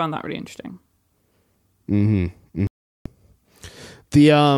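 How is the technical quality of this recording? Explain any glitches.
One clear glitch stands out: a digital broadcast dropout in this speech recording. From 2.67 s to 3.06 s the audio mutes for about 0.39 s and then resumes. The receiver stopped getting decodable frames, either from a lost signal or failed checksums, and silenced its output until clean frames returned. That pattern fits a run of about a dozen lost frames. Whatever was transmitted during that gap is gone. On a waveform it appears as a flat line. On a spectrogram it is a blank vertical band across all frequencies.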